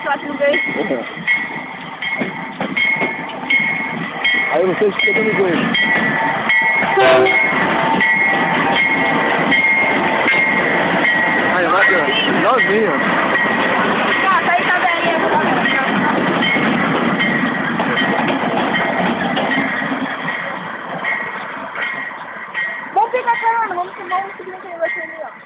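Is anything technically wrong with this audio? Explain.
No, nothing technically wrong here.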